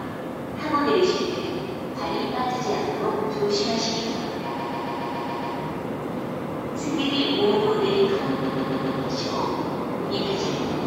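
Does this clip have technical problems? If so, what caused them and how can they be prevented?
Yes. Repeated frames cause stutters at 4.58–5.55 s and 8.43–8.99 s. A 139.3 ms block, consistent with six compressed frames, plays seven and then four extra times, adding 0.98 s and 0.56 s. Spectrograms show identical tiled blocks. Deduplicating frames during writing or transmission prevents this.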